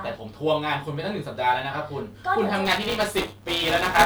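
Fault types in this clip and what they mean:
Buffer tearing: From about 2.65 s to the end of the speech, the writer and the hardware reading the ring buffer have drifted out of step and cross inside every period. That leaves roughly a tenth of each chunk filled with stale audio from around 10 ms earlier, spliced in with hard edges on both sides. You hear it as a steady robotic buzz at 200 Hz, which points to a period of about 5 ms, riding on the speech wherever there's signal.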